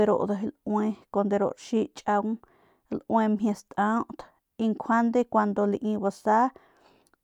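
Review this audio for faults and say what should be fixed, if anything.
Nothing in this recording needs fixing. No faults can be heard anywhere in the speech, so no changes are called for.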